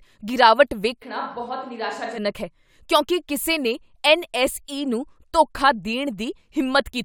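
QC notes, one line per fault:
1.04–2.17 s, switch to a distant microphone: the speech abruptly turns roomy and hollow, drops roughly 10 dB in level and loses low end, with background noise rising to around 30 dB below the speech, then snaps back at 2.17 s. The likely cause is the close mic's signal dropping out, leaving a farther pickup that hears more room than talker. On the waveform, the envelope narrows at both hard edges. On the spectrogram, the bass thins and reverberant smearing fills gaps between syllables.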